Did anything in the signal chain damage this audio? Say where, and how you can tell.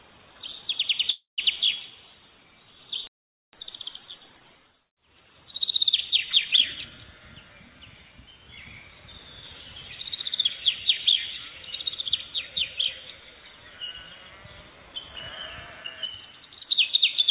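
Yes. At 1.10–1.40 s there is a call audio freeze, likely from a drained jitter buffer in the network stage. The last sound is extended as a fading buzz or hiss into about 140 ms of silence, then resumes without loss. On a spectrogram it appears as smeared horizontal streaks trailing off into a blank gap.

From 3.07 to 3.53 s there is a playback stall, likely starved or blocked output at the playback buffer. The audio cuts out mid-flow for 460 ms. On the waveform it looks like a flat line with abrupt edges.

From 3.53 to 4.45 s the player catches up at higher speed by resampling its backlog at 1.5×. Pitch rises roughly seven semitones, so spectral lines shift upward and the waveform compresses horizontally. Throughout, the narrowband call codec leaves nothing above 4 kHz.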